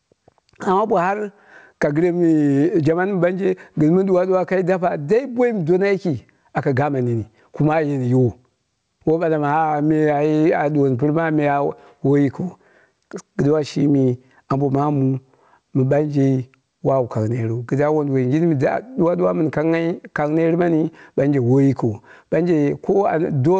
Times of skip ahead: none

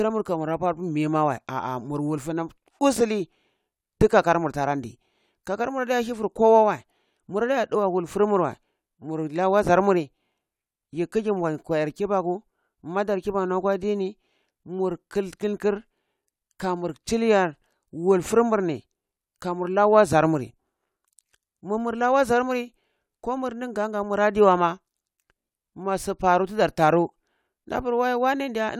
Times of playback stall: none

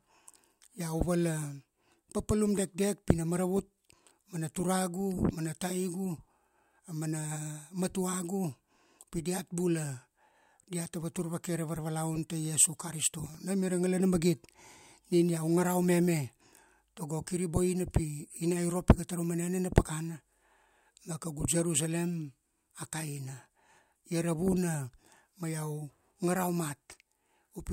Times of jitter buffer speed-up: none

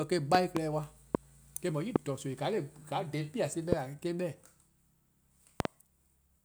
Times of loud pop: 0.35-0.59, 1.15-1.17, 1.96-1.98, 3.72-3.75, 5.60-5.68

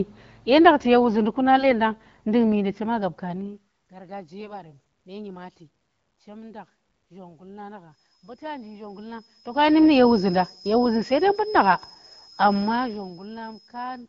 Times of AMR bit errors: 1.58-1.74, 4.40-4.56

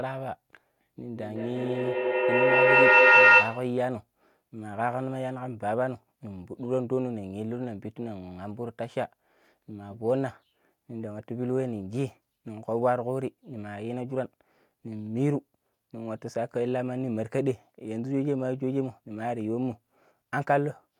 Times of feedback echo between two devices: 1.03-3.78

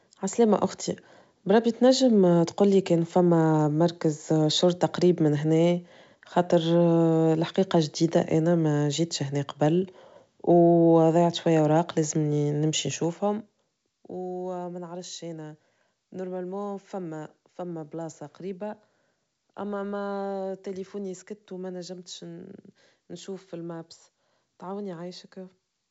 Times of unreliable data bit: none

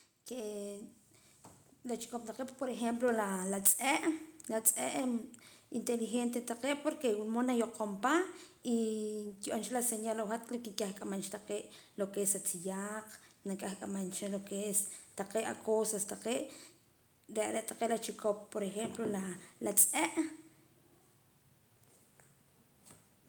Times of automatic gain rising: 0.29-3.30

